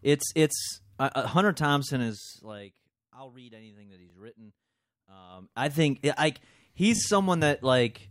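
Speech, with zipper noise from 1.93 to 2.80 s: the level falls by about 25 dB in audible 2 dB steps, roughly fifteen per second, with no smoothing between them, so each jump leaves a small click and the fade ticks audibly. Repeated buffer faults occur at 2.22–2.30 s, 4.10–4.12 s and 6.96–7.00 s. Each time, a 20 ms slice plays again with hard joins: four extra times, then once, then twice. The effect is a brief buzzing stutter, which fits a 20 ms output buffer replayed when fresh audio arrived late.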